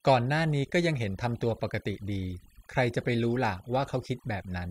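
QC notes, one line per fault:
Throughout: overdone noise removal. The background between and under the speech has been pushed down, but it is not clean: twinkling, warbling specks flicker in and out where the noise used to be. A noise reduction stage was set far too strong, so it pulled individual frequency bands right down whenever they sat close to its noise estimate, stripping the quieter parts of the speech along with the noise.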